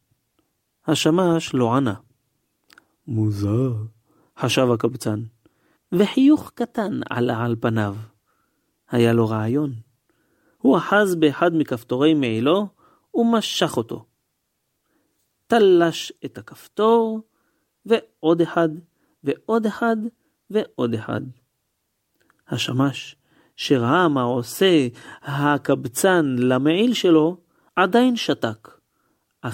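No faults can be heard anywhere in the speech recording.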